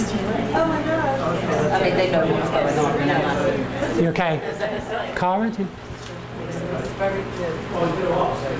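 No technical faults can be heard in this audio, which comes through a call path with a wideband codec that leaves nothing above 8 kHz.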